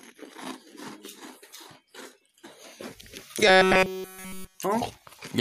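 From 3.48 s to 4.59 s the sound takes on a robotic quality caused by repeated short buffers. It collapses into a rigid, metallic buzz at about 188 Hz. That pitch fits a segment of roughly 5.3 ms being looped, with essentially all of the passage made of repeats. The likely cause is that new audio stopped arriving in time, so playback kept replaying the last short block while the real material went missing.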